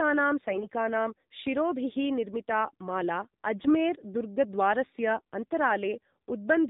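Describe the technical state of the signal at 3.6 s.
At 3.6 s the speech is AMR narrowband mobile codec audio: buzzy and synthetic, consistent with a low mode near 7.4 kbps. On a spectrogram, nothing appears above 4 kHz.

AMR bit errors run from 3.56 to 3.75 s, right after "शिरोभिः निर्मिता माला". Flipped weakly protected bits misplace excitation pulses, so pitch and level hold but the sound turns hoarse and gargly. This fits about eight damaged frames at roughly a 7 percent bit error rate. The spectrogram shows smeared, noisy harmonics, and the waveform looks ragged.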